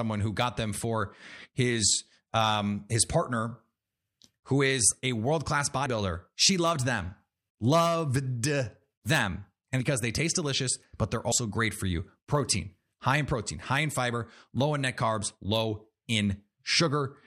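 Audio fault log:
5.85 s, 9.80 s, 11.31 s: compressed frames skipped. Whole frames of the encoded stream, each about 26.1 ms long, never reached playback, either because they were missing from the file or because the decoder rejected them as damaged. The speech jumps forward at each point, by about 70 ms at 5.85 s and 11.31 s and about 150 ms at 9.80 s. Each lost stretch leaves a brief discontinuity where the surviving frames are joined.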